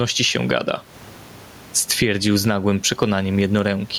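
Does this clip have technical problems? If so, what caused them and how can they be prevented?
Yes. Gain pumping runs through the whole clip. The room noise sits about 35 dB below the speech, and the gain swings by roughly 15 dB. The likely cause is input gain set far too high, with a fast limiter pulling it down on each peak. A waveform shows flattened, even peaks with filled-in gaps, and a spectrogram shows the noise floor brightening between syllables. Lowering the microphone gain and slowing or disabling the automatic limiter prevents it.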